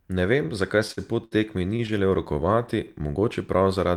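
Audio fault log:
0.87–1.91 s, repeated stalls (stutter): six separate hitches in about a second, where the sound briefly hangs on its last fragment while the receiver waits for late packets and bridges each gap by continuing what it already has. The holds add up to 163 ms, about 16% of the span, the longest 62 ms. Nothing is skipped, which sets it apart from packet loss, and the stops are discrete jolts rather than an even stretch.
2.33–3.69 s, jitter buffer slow-down: the speech is drawn out smoothly to about 92% speed, adding 112 ms, as the receiver repeats single pitch periods and slivers of pauses to rebuild its buffer reserve. The pitch stays where it was, unlike a tape or clock slow-down that would also drop it. The delay is spread across the passage instead of arriving in the separate halts heard in the earlier stutter.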